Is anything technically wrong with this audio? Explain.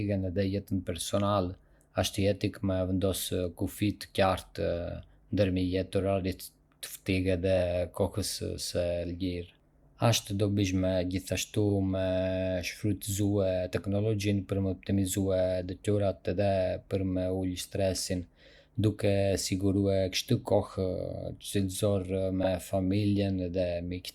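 Yes. The speech has two instances of repeated frames. The first is at 11.69 to 11.73 s, just after "dobishme gjithashtu", and the second is at 22.43 to 22.49 s. In each, a 40 ms block of compressed audio, consistent with two 20 ms frames, was delivered twice, so the decoder played it one extra time. The result is a brief stutter where the same sliver of sound restarts, and each event adds 40 ms to the running length.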